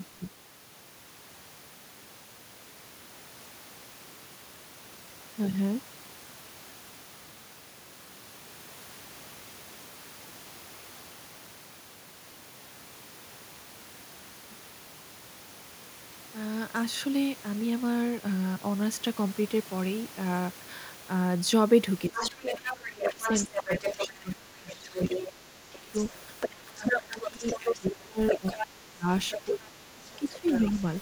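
From 22.09 to 25.94 s and again from 26.75 to 30.78 s, the talker gets pushed down by about 20 to 25 dB in spots. That's speech suppressed in double talk, likely the echo canceller ducking everything while both sides talk. Over the same stretch, the other side's voice leaks through at 22.14–24.08, 24.71–25.26, 25.73–27.95, 28.28–28.67, 29.3–29.68 and 30.13–30.8 s. It's sometimes nearly as loud as the talker, likely loudspeaker echo the canceller didn't fully remove.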